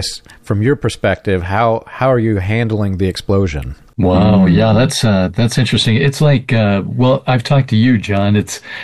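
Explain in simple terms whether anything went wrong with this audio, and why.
No faults can be heard.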